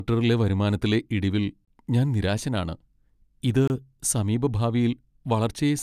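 Speech with a gap between chunks at 1.65–1.68 s, after "വരുമാനത്തിലെ ഇടിവിൽ" and before "ഞാൻ നിരാശനാണ്", and again at 3.68–3.70 s. Each 25 ms silence falls at a join in 2-second chunks.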